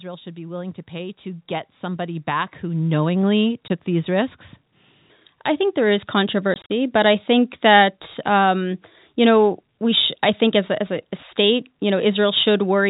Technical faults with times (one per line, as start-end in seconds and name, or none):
0.23-3.44 automatic gain rising
3.68 packet loss filled with silence
6.54-6.69 packet loss filled with silence